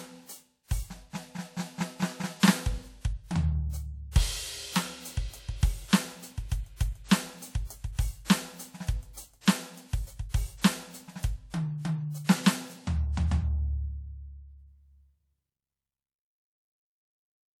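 A short smear of hiss runs just ahead of three sharp attacks in the music, at 4.11 to 4.16 s, 8.25 to 8.30 s and 12.24 to 12.29 s, each lasting about 43 to 50 ms and blurring the onset. This is pre-echo. The transform codec spread quantisation noise sized for each loud attack across its whole block, so the noise also filled the quiet moment before it. The spread points to a fairly long transform block.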